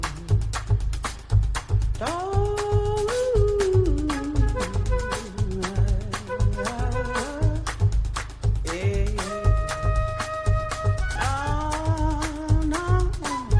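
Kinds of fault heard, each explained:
Nothing here sounds wrong to me: no glitches, dropouts or distortion, just the audio running along as it should.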